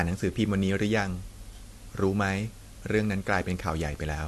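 From the first moment to the end, the speech sits over a steady, even hiss. That's low bit depth with dither. The audio has been squeezed down to about 7 bits, and noise was mixed in before each sample got rounded, so the rounding error turns into flat white noise rather than grit or distortion on the voice. It stays put the whole way through, roughly 25 dB under the speech.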